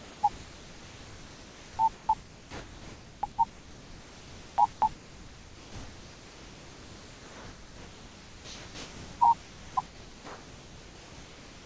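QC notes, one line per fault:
Throughout, sound chopped by the voice detector. About 10.5 s of the speech is replaced by comfort noise, leaving only short stretches of real sound. The likely cause is the sender's voice detector gating repeatedly.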